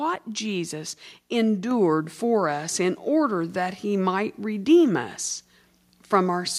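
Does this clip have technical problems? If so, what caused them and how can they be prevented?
Yes. At 1.71 s the whole speech clip, voice and room sound together, jumps up by about 4 dB in a single step, just before "for us in order", and stays at that higher level. This is a microphone volume stepped up fault: the call software judged the input too quiet and raised the device's input gain in one jump rather than gradually. Because the change happens at the microphone, everything it picks up is lifted at once. To prevent it, turn off automatic microphone level adjustment in the call software or operating system and set a fixed input gain beforehand.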